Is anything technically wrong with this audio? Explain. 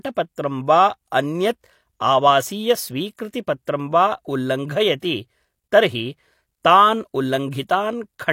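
Yes. Pre-echo at 0.33 to 0.38 s, 3.16 to 3.19 s, and 3.31 to 3.34 s just before "वा उल्लङ्घयति तर्हि". The codec spread block quantisation noise ahead of sharp speech attacks, leaving a hiss of 23 to 49 ms that smears their onsets.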